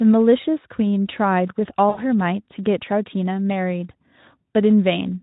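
Between 1.90 and 2.01 s, packets drop and the Speex decoder extrapolates its last frame, fading into a buzzy tone or coloured noise: VoIP packet loss concealment.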